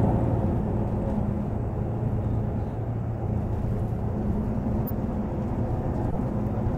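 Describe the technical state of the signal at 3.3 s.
Just before 3.3 s, from 3.23 to 3.25 s, there is a corrupt frame decoded fault. A few consecutive compressed frames arrived with flipped bits, and the decoder played them anyway. Misread gains and codes put energy in the wrong frequency bands for the length of those frames. The result is a brief, unnatural blip of noise laid over the sound, peaking at about -25 dBFS. It lasts roughly 24 ms before the signal returns.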